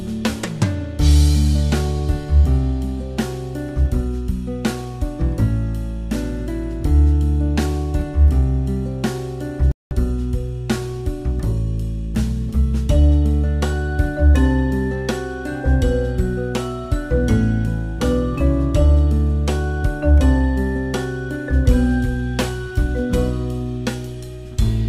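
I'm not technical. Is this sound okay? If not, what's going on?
No. There is one problem. At 9.72 seconds the sound suddenly cuts out. It stays silent until 9.91 seconds, a gap of about 0.19 seconds, then carries on. This is called a playback stall. It is likely that the player briefly ran out of audio to play, or got held up doing something else. So it simply went quiet until it could continue. The break lands in mid-flow, which is why it is noticeable.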